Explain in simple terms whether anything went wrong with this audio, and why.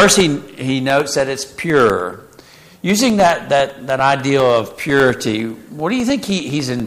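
A steady ticking runs through the sound from 0.10 s to 6.80 s, ten clicks a second. These are periodic USB or driver dropouts: something interrupts the audio connection every 0.1 s, and each time about a millisecond of sound is replaced by silence, around seventy gaps in all.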